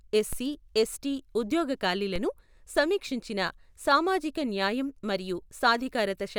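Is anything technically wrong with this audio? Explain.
Yes. There are two DC steps in this speech, at 0.33 s and again at 2.16 s. At each point the waveform's zero line suddenly jumps by an offset of about -24 dBFS, then settles back as a roughly 5 Hz high-pass drains it away. Each jump comes through as a low thump, while the speech itself continues uninterrupted. This sets it apart from a dropout or digital click, where the signal itself breaks or spikes.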